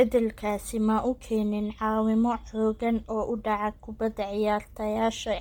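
Throughout the speech there is heavy codec damage, likely from Bluetooth LC3 compression. Upper frequencies are coarsely coded and partly filled with noise, giving a breathy, grainy edge. The smearing fits 10 ms frames and a low bitrate near 32 kbps. Content reaches about 20.2 kHz.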